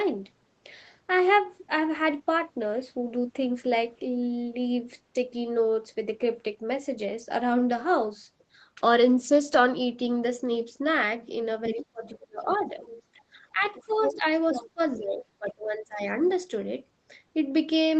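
At 11.65 s a second voice slips in underneath for a moment, about 10 dB below the talker, until 11.83 s. That's the other side's voice leaking through, likely because the far end's loudspeaker output reached the mic and the echo canceller didn't fully subtract it. It comes back faintly from 12.48 to 13.02 s at around 20 dB down, louder again from 13.61 to 15.02 s at about 10 dB down, and as a brief, very quiet trace from 16.23 to 16.36 s, roughly 25 dB under.

Overlapping those, the main talker's speech is suppressed in double talk: from 11.69 to 12.82 s, 13.14 to 14.24 s, and 14.74 to 16.01 s the voice sags or drops out in chunks. The canceller, likely unable to separate the local voice from the echo while both were active, ducked everything. The first stretch is the deepest, around 30 dB down for about a second in total. The second is shallower, roughly 15 dB for half a second, and the third is about 20 dB for around a second. 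All of this sits inside a band that tops out at 8 kHz with Opus coding texture, which fits an ordinary call path.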